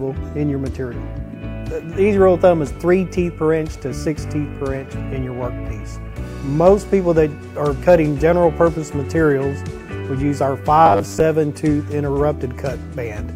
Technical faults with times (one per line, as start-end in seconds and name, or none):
10.86-11.20 robotic sound from repeated short buffers